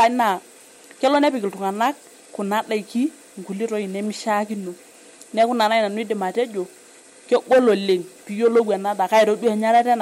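Speech clip affected throughout by sample clock jitter: the converter's clock wanders, so each sample is captured a little early or late at random, on the order of half a microsecond. Because the resulting error scales with how fast the waveform is changing, it shows up as a fine hiss and roughness riding on louder and brighter parts of the speech, sitting roughly 50 dB below the signal and disappearing in the pauses.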